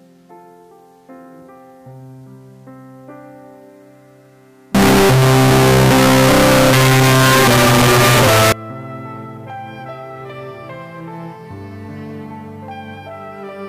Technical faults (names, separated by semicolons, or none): signed and unsigned mixed up